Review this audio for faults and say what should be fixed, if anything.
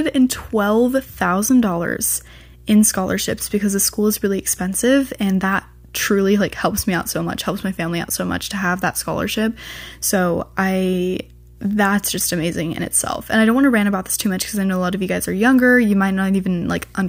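Mains hum, throughout the clip: a steady 60 Hz tone sits roughly 25 dB below the speech, with some low harmonics, from power-line coupling through a ground loop or nearby transformer. To prevent it, keep audio cables away from transformers and fix grounding with a single earth point or a ground-lift isolator.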